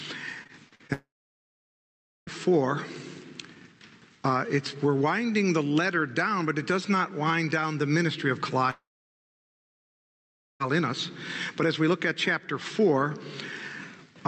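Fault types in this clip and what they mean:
Repeated packet loss (robotic sound): Between 0.43 and 0.91 s, five short gaps, the longest about 43 ms, are patched by stretching the preceding sound, giving a choppy, metallic texture. A spectrogram shows repeated smeared, frozen slices; the waveform shows jagged, repetitive fragments.
Long network dropout: At 0.93 to 2.29 s and 8.71 to 10.62 s, a fading buzz briefly continues the last sound, then near-silence lasts about 1.2 s and 1.8 s, likely from packets never arriving. Spectrograms show a short blurred tail then blankness; the waveform flattens.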